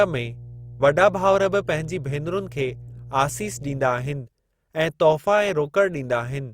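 A steady low drone sits under the speech from the start until about 3.88 s, then stops. It is mains hum at 60 Hz, roughly 20 dB below the speech level. The power line is leaking into the signal path, most plausibly through a ground loop or a transformer near the cabling. That coupling adds a constant tone at the supply frequency, along with some low harmonics above it.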